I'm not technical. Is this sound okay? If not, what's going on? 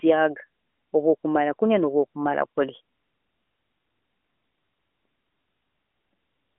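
Yes, nothing here sounds wrong.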